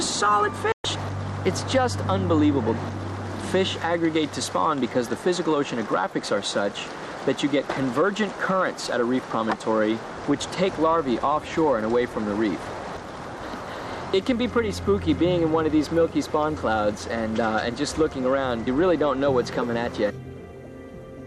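A digital broadcast dropout runs from 0.72 to 0.85 s: the receiver stopped getting valid frames and muted until good ones returned. The sound fades out within about 3 ms, leaving a 120 ms hole that fits roughly five lost frames, and what was sent during that gap is gone.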